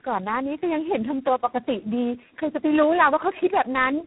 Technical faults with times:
0.00-4.06 tandem speech coding

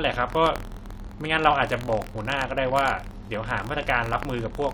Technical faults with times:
0.00-4.74 buffer tearing

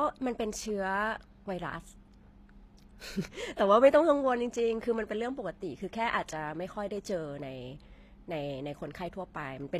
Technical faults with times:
0.00-9.80 HE-AAC compression

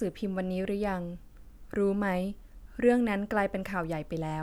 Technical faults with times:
none

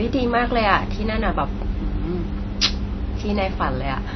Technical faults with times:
0.00-4.16 MP3 compression

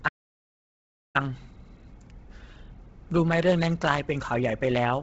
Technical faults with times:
0.00-5.03 Bluetooth LC3 compression
0.09-1.15 audio dropout to silence

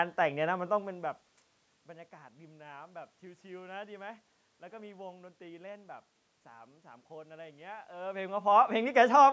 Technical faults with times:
none

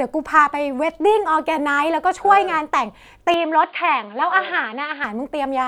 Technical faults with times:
3.34-5.04 input switched to a poorer device

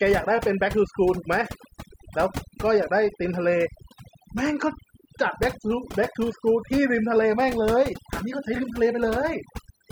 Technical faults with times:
0.00-9.91 overdone noise removal

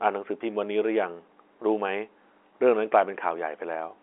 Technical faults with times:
none

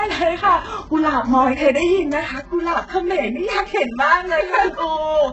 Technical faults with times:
0.00-5.33 HE-AAC compression
2.40-5.33 channel delay (comb filtering)

